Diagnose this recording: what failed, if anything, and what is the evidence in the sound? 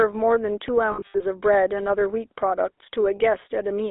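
A buzzy, gravelly roughness runs through the whole recording, with nothing audible below 300 Hz or above 3.7 kHz. That points to the codec stage: the GSM full-rate codec, consistent with 13 kbps, rebuilds the voice from a vocal-tract model driven by coarse pulse excitation, leaving plainly audible damage.

Between 0.92 and 1.23 s the sound repeatedly freezes into a rough, metallic ring, with the longest hold under a tenth of a second. A shorter ring follows at 3.16 to 3.20 s. These are lost GSM frames from the network stage. The first cluster fits about ten 20 ms frames dropped, roughly 200 ms of audio across a 280 ms stretch, and the second fits two frames. Each gap was filled by repeating the last good frame's settings.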